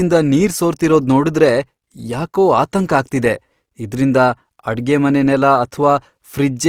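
Throughout, the speech turns grainy and rough, with noise filling bands instead of MP3-style swirling holes, likely Opus compression, which fits about 24 kbps.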